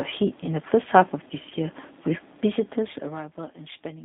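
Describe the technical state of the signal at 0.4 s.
At 0.4 s the speech carries G.729 codec damage, present throughout the clip. The band runs only from about 150 Hz to 3.7 kHz, so the sound is thin and muffled. The speech is rebuilt from a vocal tract filter, a pitch predictor and a few pulses in each short frame. That model, which fits an 8 kbit/s coder, leaves plainly audible damage, with the speech slightly rough and synthetic.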